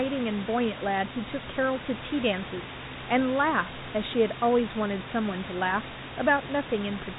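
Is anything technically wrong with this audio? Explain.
No, the speech comes through a telephone-style G.711 path that lets nothing above about 3.8 kHz pass, with room noise sitting about 10 dB below the speech, and nothing in the signal points to a technical fault.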